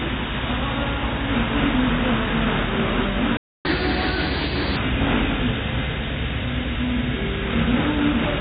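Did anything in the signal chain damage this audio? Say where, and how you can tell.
Yes, at the playback stage. The sound drops to silence at 3.37 s and resumes at 3.65 s, a gap of about 0.28 s in mid-flow. This is a playback stall, likely the player's buffer running dry or its thread being blocked until it recovered.

Right after the gap comes catch-up at higher speed, also in playback. From 3.65 to 4.76 s the sound runs 1.25 times fast, with pitch raised by around four semitones, then settles back. The player is resampling its backlog to win back the time lost in the stall.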